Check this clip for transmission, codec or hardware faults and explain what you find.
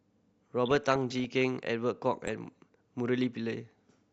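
Two bursts of DAB burbling interrupt the speech, from 0.66 to 1.34 s and again from 2.24 to 2.47 s. Weak reception let bit errors, a small fraction of a percent, slip past error correction into the MP2 audio data. Corrupted samples put short blips of noise into individual sub-bands, and corrupted scale factors make sub-bands leap in level for up to a frame, so the speech is overlaid with noise blips and level jumps, denser in the longer first burst.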